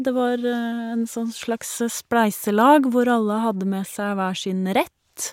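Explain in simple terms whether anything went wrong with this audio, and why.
Nothing went wrong here: the speech in the recording arrives intact, with no technical fault heard anywhere along the way.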